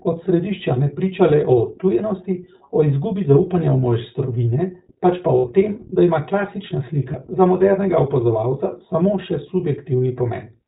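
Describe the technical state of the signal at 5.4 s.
Lost iLBC frames occur from 5.38 to 5.46 s, right after "mojstrovine pač pa" and before "tem da ima klasična". The decoder fills the roughly 60 ms gap, which fits three lost 20 ms packets, by repeating the last pitch cycle blended with noise. It sounds like a briefly held, slightly buzzy vowel. Because each iLBC frame decodes independently, the voice snaps back cleanly straight afterwards.

Underneath, the iLBC codec is plainly audible. The band stops at 4 kHz, and the speech has a rough, synthetic edge, consistent with iLBC's 15.2 kbps mode.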